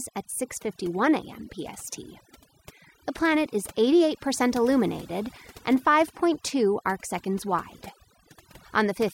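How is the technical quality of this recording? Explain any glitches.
The recording suffers from overdone noise removal, present for the whole clip. A noise reducer set far too aggressively cuts any frequency band that sits near its noise estimate, and the quieter parts of the speech are removed along with the noise. The pauses drop to near silence scattered with twinkling specks. A spectrogram shows a dark background dotted with isolated bright flecks and ragged, gappy speech harmonics.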